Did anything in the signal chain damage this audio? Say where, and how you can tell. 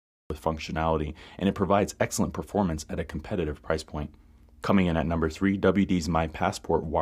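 Yes. There is a cut-off start at the capture stage, where recording or stream delivery began late. The file holds digital silence from 0.00 to 0.30 s, and at 0.30 s the speech enters mid-sound, just before "functionality and it provides". There is no natural onset or fade-in; the level jumps from silence straight into an utterance already underway. The capture began after the talker had started, so the opening of that sound was never recorded.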